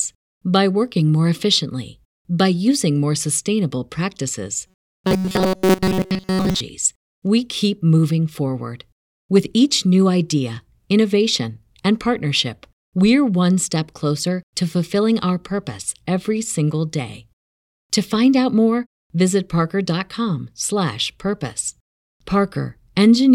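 It's a speech clip, and right after "using more sustainable practices" it goes robotic, from about 4.67 s to 6.60 s, with robotic sound from repeated short buffers. The voice turns into a rigid metallic buzz pinned at 188 Hz, though it still roughly tracks the speech. That's likely the playback starving for new audio and looping a tiny chunk, about 5.3 ms, which fits that pitch, so most of the real audio in that stretch gets skipped.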